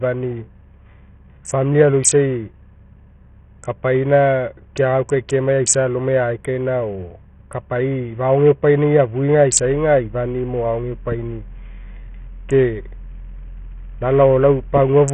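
A low-bitrate Bluetooth link, most likely using SBC compression at a very small bit pool, has degraded this speech recording from start to finish. Starved of bits, the encoder drops its upper sub-bands entirely, so nothing survives above 9.1 kHz and the treble sounds cut off. The remaining bands are coarsely quantised, laying a gritty, heavy noise over the sound. That level of damage fits a bitrate of around 48 kbps.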